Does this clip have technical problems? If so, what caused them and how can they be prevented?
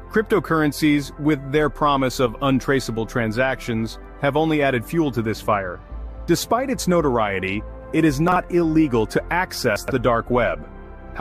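Yes. Brief jumbled moments at 8.28–8.36 s and 9.76–9.92 s come from chunks out of order: a 40 ms block played one slot late, then three slots late, leaving hard joins. Sequence-number each block and reorder them in a buffer before playback.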